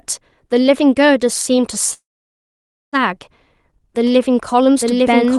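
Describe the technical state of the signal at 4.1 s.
From 4.07 s to the end of the clip the speech is doubled: a second, full-band copy of the same audio runs about a second behind the original at roughly the same loudness. It cuts in abruptly, with no decay or room colouring. This doubled audio track is likely from the signal being captured twice, once through a slower path, or from an edit that left two copies out of step.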